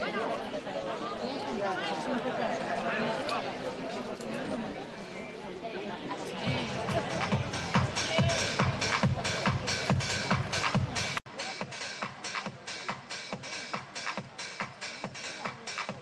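At 11.18 s the sound drops out for about 80 ms. When it returns, it is duller and a few decibels quieter, and it stays that way to the end. Nothing is left above 9.4 kHz, below the 12 kHz the Opus call path carries before this point. A new background noise also appears, roughly 30 dB under the signal. This is likely an input switched to a poorer device mid-recording.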